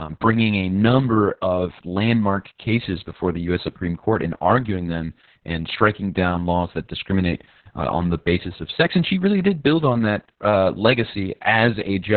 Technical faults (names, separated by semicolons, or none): Opus voice compression